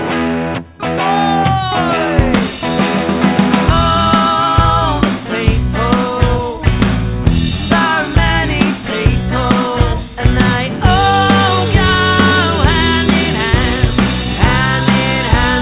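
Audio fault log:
Nothing to log here: the sound comes over an ordinary call line whose 64 kbps G.711 mu-law coding leaves nothing above 4 kHz, which is just how that path sounds.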